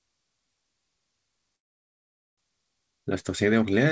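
Speech carried over a call path with a single call audio freeze from 1.56 to 2.40 s. The sound briefly continues past the stall, then drops to silence for about 0.81 s before resuming exactly where it stopped, so nothing is lost but everything afterward lands about 0.82 s late. The likely cause is delayed packets draining the jitter buffer. The band-limited sound, with nothing above 8 kHz, fits a G.722 codec at 64 kbps.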